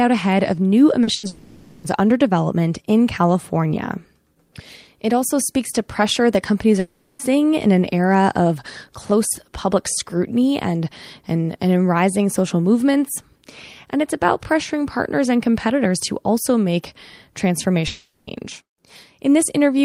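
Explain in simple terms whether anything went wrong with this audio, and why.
Right after "ahead of new", at 1.03 to 1.10 s, there is a short concealed packet loss. About 40 ms of speech never arrived, and the receiver patched the gap by extending the last sound, which leaves a brief smear.

From 1.15 to 1.26 s comes a burst of packet loss. About 80 ms is missing, and the last sound is stretched and fades before speech picks up further along.

Three long network dropouts follow: 1.27 to 1.86 s, 6.79 to 7.22 s (after "to pressure that companies", before "in an era of"), and 17.87 to 18.30 s. In each, 0.4 to 0.56 s of speech is replaced by a fading continuation of the last sound, likely because the connection stopped delivering audio.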